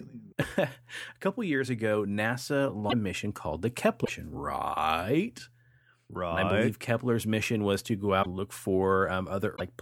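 At 0.41, 2.89, 4.04, 8.22 and 9.55 s the speech skips with a 30 to 60 ms glitch, likely a broken MP3 bit reservoir after lost frames.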